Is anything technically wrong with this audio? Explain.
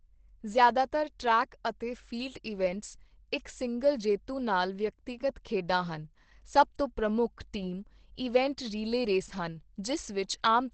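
Yes. Throughout, likely Opus compression in its low-rate speech mode, fitting about 16 kbps, discards the upper band. The speech sounds muffled and hoarse, and a spectrogram shows a flat ceiling at 8.4 kHz.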